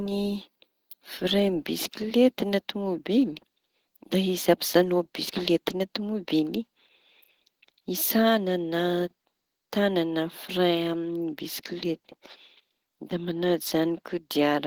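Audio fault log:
throughout, Opus compression: the speech was likely coded with Opus at a low rate, fitting about 16 kbps in its hybrid speech mode. The encoder runs short of bits and fills bands with folded or noise content, so the voice sounds plainly hoarse, grainy and rough.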